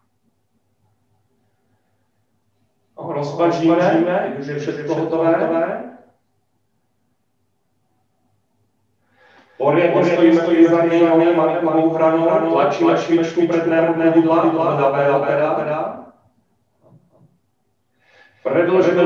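From start to end, a doubled audio track: a second, somewhat quieter copy trails by about 300 ms, likely from a slower capture path mixing in.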